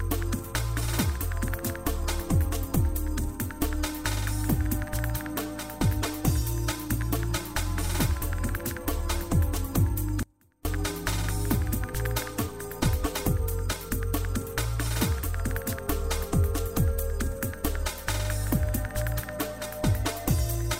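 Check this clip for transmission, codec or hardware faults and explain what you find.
There's one fault here: an audio dropout to a faint residue from 10.23 to 10.65 s. For a bit over 0.4 s the sound cuts out abruptly mid-flow, but the gap isn't silent. A faint trace of the signal carries on, roughly 30 dB below its normal level, before everything snaps back. That's likely the wanted feed being lost briefly while the path after the break stayed live, letting only a weak leak through.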